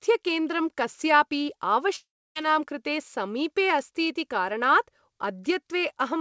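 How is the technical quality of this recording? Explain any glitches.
The recording has one clear glitch: a gap of roughly 0.4 s in the speech, from 1.96 s to 2.37 s. Its likely cause is a long network dropout. When the packets stopped arriving, the receiver stretched the last bit of sound into a fading buzz. That faded to near silence for about 0.29 s before the speech resumed, with the missing 0.4 s never recovered. On a waveform this shows as a tapering smear and then a flat stretch. On a spectrogram it appears as a blurred band decaying into an empty column. As on the rest of the call, nothing appears above 8 kHz, which fits a wideband call codec such as G.722.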